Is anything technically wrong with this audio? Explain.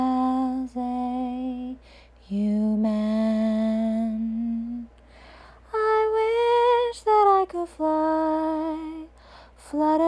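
No, no technical faults detected.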